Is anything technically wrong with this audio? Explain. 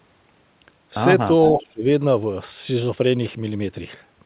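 Yes. From 1.56 to 1.85 s the speech drops by around 25 dB for roughly 300 ms. This is speech suppressed in double talk, likely caused by an echo canceller that couldn't separate this talker from far-end echo and turned both down. Packet loss would cut out abruptly. This drop comes through the call path's narrowband audio, which has nothing above 4 kHz.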